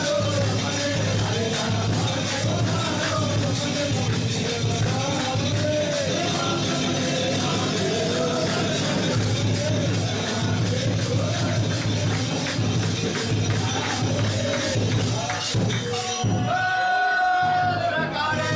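No technical faults are audible.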